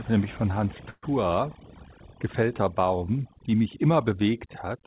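Across the whole recording there is overdone noise removal. The suppressor was set aggressively enough to pull individual frequency bands down or out whenever they sat close to its noise estimate, so low-level parts of the speech were cut along with the hiss. The background drops and breaks up into small twinkling specks, and the sound is confined to a narrow band that stops at 4 kHz, which fits a G.711 call path.

From 0.9 to 1.05 s there is a call audio freeze, most likely from packets stalling in transit until the jitter buffer emptied. For about 125 ms the receiver stretched the last sound out as it faded, ending in roughly 40 ms of silence. The speech then resumes exactly where it broke off. Nothing is lost, but a 125 ms gap has been inserted, delaying everything after it.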